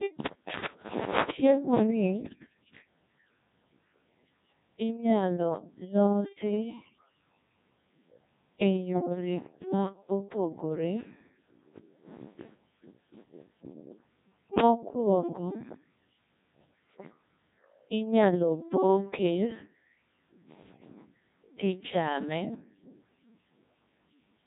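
From start to finish, the speech has passed through a Codec 2 vocoder. The sound points to its 1.6 kbit/s mode. No waveform survives. The decoder rebuilds the voice from sine waves, guided only by pitch, voicing, energy and a rough spectral envelope. The damage is heavy. The voice comes out robotic and buzzy. The natural texture of the speech is gone throughout.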